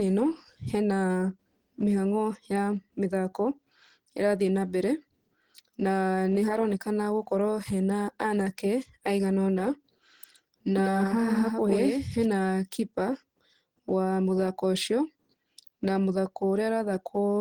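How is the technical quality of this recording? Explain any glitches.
The recording has clear technical faults: low-bitrate codec damage throughout, and a short stretch where the sound is doubled.

Throughout, the speech sounds hoarse, grainy and muffled in its texture, though the bandwidth still reaches roughly 20.1 kHz before nothing remains. This is likely Opus compression at a low rate, around 16 kbps, which points to the codec's hybrid mode. There the lower band is coded as speech and the upper range is filled in coarsely, so detail turns rough instead of dropping out.

From 10.76 s to 12.26 s, every syllable is followed by a second, full-band copy about a tenth of a second later, roughly 5 dB quieter. It sounds like a hard slapback with no room colour, and it switches on and off abruptly at both ends. This doubled audio track is most likely the same signal arriving twice, once through a slower path, and mixing with the original out of step.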